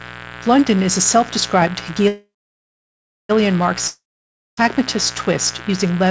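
A raspy 60 Hz mains buzz runs under the whole speech clip, roughly 15 dB below the speech. Its sharp switching spikes spread harmonics up toward the 8 kHz limit of the call band.

From 2.08 to 3.31 s there is a call audio freeze. The last sound smears into a fading buzz, then about 1 s of silence. The speech resumes with nothing missing but 1.2 s late, most likely because the jitter buffer ran dry.

From 3.87 to 4.59 s a long network dropout follows. A brief fading tail gives way to about 0.58 s of silence. When the speech returns, about 0.7 s of it is gone, likely because those packets never arrived.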